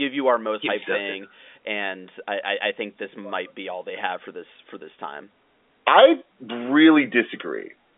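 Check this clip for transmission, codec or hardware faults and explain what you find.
No transmission, codec or hardware faults stand out: the speech arrives over a standard G.711 telephone path, whose A-law coding at what sounds like the usual 64 kbps keeps the signal within a line band of roughly 250 Hz to 3.6 kHz, with nothing above about 3.8 kHz and at most a faint trace of coding damage.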